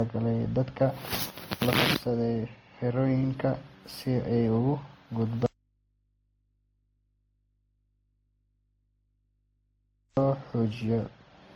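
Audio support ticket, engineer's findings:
Transcoding between lossy codecs, whole clip: layered artefacts from several coders heard at once, content reaching up to about 20.1 kHz. Likely a WMA 64 kbit/s to Opus 24 kbit/s to WMA 1 96 kbit/s chain, each pass re-encoding earlier damage.

Audio dropout to a faint residue, 5.46 to 10.17 s: speech cuts out abruptly for about 4.7 s, leaving only mains hum well down, around 45 dB under the speech. Likely signal lost upstream while the open input stayed live.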